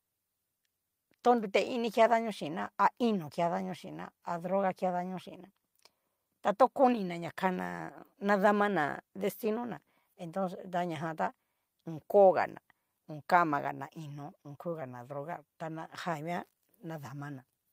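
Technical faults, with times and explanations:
No technical faults are audible anywhere in this speech recording.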